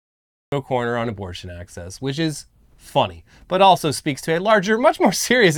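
The recording or stream began late, a cut-off start: the speech clip holds digital silence from 0.0 to 0.52 s, then enters abruptly mid-sound just before "a corner on abortion", with no natural attack or fade-in, as though a sentence was already underway.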